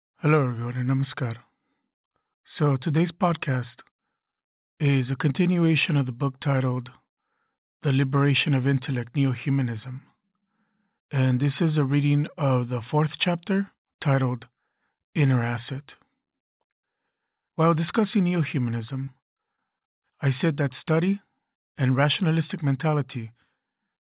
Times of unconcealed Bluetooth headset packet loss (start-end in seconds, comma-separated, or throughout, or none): none